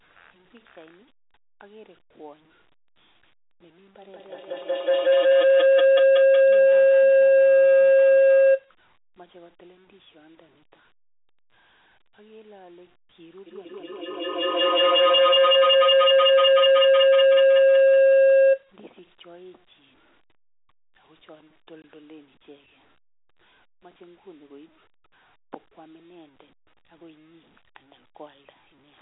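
From 4.02 to 8.75 s and again from 13.46 to 18.74 s, a feedback howl builds because two devices in the room share the call and the microphone-to-loudspeaker loop gains level on every pass. Each time it narrows to a tone around 500 Hz, pulsing roughly every fifth of a second and peaking about 23 dB above the speech. A spectrogram shows a thick horizontal line that brightens over time.

At 21.82 s, packet loss filled with silence cuts a 20 ms hole in the speech, which fits a single lost packet. The waveform drops to near silence, and the spectrogram shows a thin blank vertical stripe inside the telephone band.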